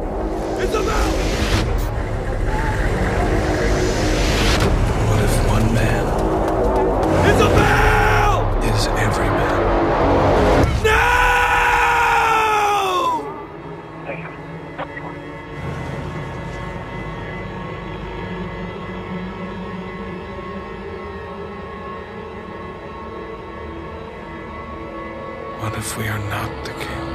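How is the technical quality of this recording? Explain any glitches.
No glitches or technical faults can be heard here.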